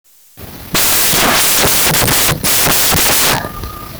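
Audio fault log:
Throughout: samples built from the wrong bytes. The speech reaches the listener as loud, harsh broadband noise, close to white on the louder sounds, rather than a voice. The reader joins each sample's bytes wrongly, whether offset by one byte, in swapped order or with the wrong alignment. The busy low-order bits end up as the large part of every value. That turns the signal into dense, broadband noise at high level.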